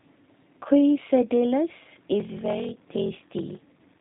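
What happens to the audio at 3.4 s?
At 3.4 s you're inside a block size mismatch (padded) that starts at 2.18 s and runs to the end. One stage hands over shorter blocks than the next one reads, and the leftover space in each block is filled with zeros. Each block gets a tiny silent gap, which produces a buzz at about 43.1 Hz. That rate fits a 1024-sample read. The gaps also stretch the speech to 0.861 times normal speed, so it drags a bit.

The same moment also carries the G.729 codec damage that runs through the whole clip. Nothing above about 3.8 kHz gets through, so the speech sounds narrow and telephone-like. The codec rebuilds each 10 ms frame from a vocal tract filter, a pitch predictor and a handful of pulses, and that leaves the speech plainly rough and slightly synthetic. It sounds like the 8 kbit/s G.729A flavour.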